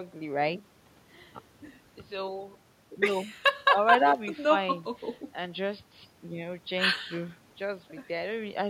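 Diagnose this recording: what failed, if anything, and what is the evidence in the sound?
Nothing in this speech recording points to a failure at any stage. A low room noise sits about 42 dB below the speech, which is simply the acoustic background picked up by the microphone.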